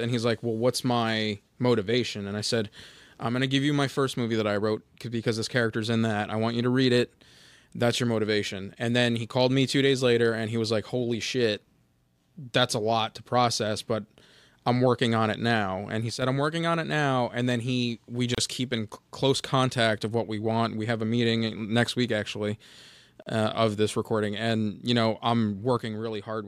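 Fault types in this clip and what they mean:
One channel drops out: the speech suddenly dips about 6 dB at 16.10–16.22 s and from 25.77 s onward, likely from one stereo channel lost before mono summing.
Gap at a join of encoded pieces: gaps with smeared edges of 31 ms at 18.35 s and 39 ms at 23.22 s, from untrimmed encoder delay and padding.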